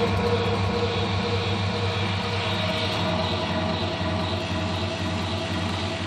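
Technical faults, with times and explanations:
No technical faults can be heard anywhere in the audio. Nothing stands out at any point that calls for a time or an explanation.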